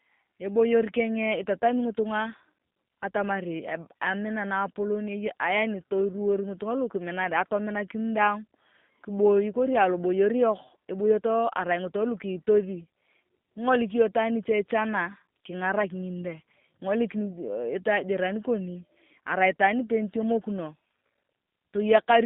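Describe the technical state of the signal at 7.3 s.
G.729 codec damage is present at 7.3 s, as it is throughout the clip. The speech is rebuilt from a vocal tract filter, pitch predictor and sparse pulses, which fits an 8 kbit/s stream. It is confined to roughly 150 Hz to 3.7 kHz and sounds plainly rough and synthetic.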